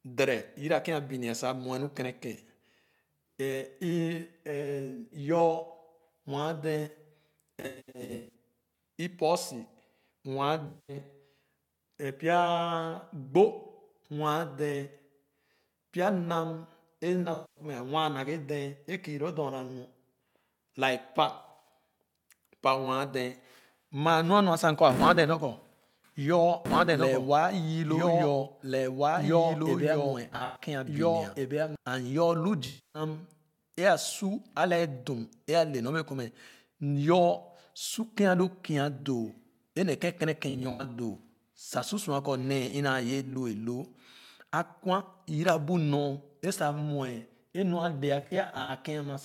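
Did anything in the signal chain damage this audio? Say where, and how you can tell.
Yes. The codec or network stage dropped AAC frames, with concealment, eight times: 7.60–8.33, 10.67–10.96, 17.33–17.64, 21.38–21.69, 30.25–30.61, 32.67–33.02, 40.50–40.85 and 48.22–48.70 s. Each sounds like a smeared, noisy or phasey patch of roughly 0.2–0.5 s, where the decoder rebuilt the missing audio from the last good spectrum. On a spectrogram these appear as blurred, grainy blocks without crisp harmonics. In the waveform the envelope flattens instead of following the speech.

A doubled audio track runs from 26.66 to 31.76 s. A full-band copy of the speech follows about one and a half seconds behind at about 5 dB lower. It has no reverb tail or room colour, and it starts and stops abruptly. The likely cause is a second, slower capture path or an edit mixing in an out-of-step copy. A spectrogram shows the same speech pattern repeated and shifted in time. 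In the waveform, overlapping envelopes appear between those cut points.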